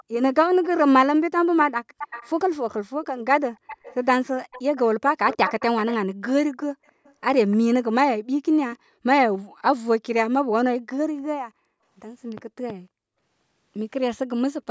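From 0.00 to 0.04 s, 0.63 to 0.68 s, 1.98 to 2.73 s, 3.55 to 3.95 s, 4.51 to 5.96 s and 6.53 to 7.57 s, a faint copy of the speech trails about 0.3 s behind, likely an echo leak from a far-end loudspeaker. Unlike room reverberation, it is a distinct delayed repeat. At 9.50 to 9.61 s and 11.38 to 11.81 s, the background is gated by the echo canceller and drops by about 40 dB, then returns.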